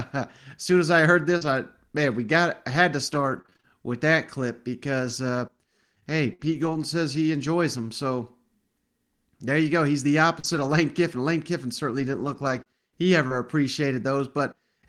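Speech, marked by scattered short gaps in two stretches. From 1.37 to 6.79 s, about seven small holes appear, none longer than roughly 50 ms. From 10.39 to 13.34 s, about three more occur, the longest near 40 ms. Packets arrived lost or late. The receiver covered each hole by stretching the last sound. The result is brief ticks, smears and hiccups in otherwise clear speech.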